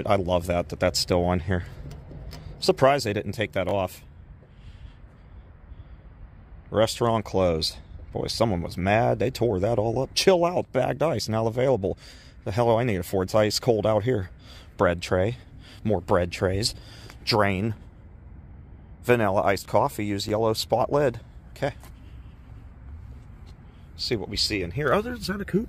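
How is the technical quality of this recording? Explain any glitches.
The recording has two brief glitches, both chunks out of order. At 3.69 to 3.71 s and 20.28 to 20.30 s, one 10 ms chunk plays one slot late. The swap creates hard joins, heard as a tiny jumbled moment.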